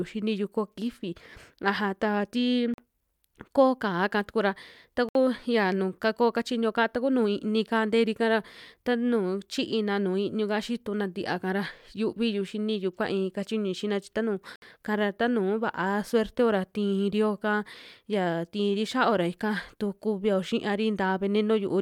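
Silent holes at 2.74 s (43 ms), 5.09 s and 14.56 s (64 ms each) are likely Bluetooth dropouts. Late packets were discarded, so the speech skips ahead rather than stalling and continuing.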